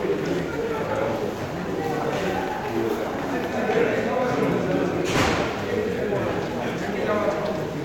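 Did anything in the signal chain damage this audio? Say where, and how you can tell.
No, nothing along the chain seems to have left a mark on this one, as there's no point in the audio where the signal gets broken up, bent out of shape or knocked off course.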